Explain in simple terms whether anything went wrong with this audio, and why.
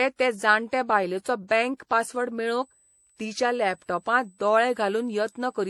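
Two things went wrong. The speech sounds smeared and swirly throughout. That is likely transcoding between lossy codecs: it was squeezed by one compressor, then squeezed again by another.

From 2.62 s to the end, a faint, steady high whistle at 8 kHz appears. That is USB whine, electrical noise from a computer's USB connection leaking into the audio.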